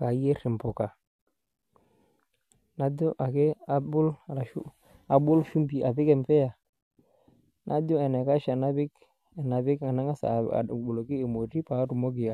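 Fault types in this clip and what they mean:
No faults are audible here.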